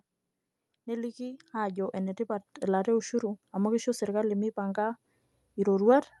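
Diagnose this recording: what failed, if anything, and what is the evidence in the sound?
Call-side gain control stepped the microphone volume up twice, so voice and background jump together: about 6 dB at 1.38 s, and about 4 dB at 2.4 s, right before "elaata e ushuru amu".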